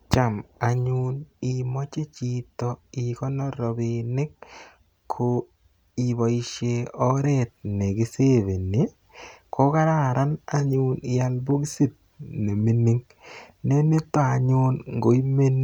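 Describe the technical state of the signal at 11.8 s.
At 11.8 s you're inside a sudden gain jump running from 7.01 s to the end: speech and background noise both sit about 4 dB louder, likely from a gain step applied without a ramp.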